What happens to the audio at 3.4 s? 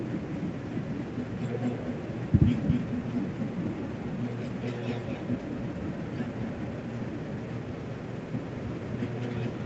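At 3.4 s, as throughout the clip, the speech carries echo with no canceller: the far end's loudspeaker feeds its microphone and the voice returns about a fifth of a second late, about 7 dB quieter. On a spectrogram each syllable has a fainter delayed twin; the waveform shows smeared, doubled envelopes.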